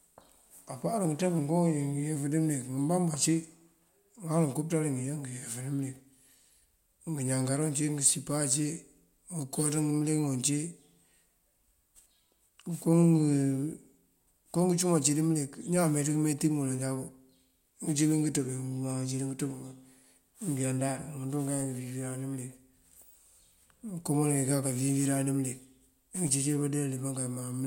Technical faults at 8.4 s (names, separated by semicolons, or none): none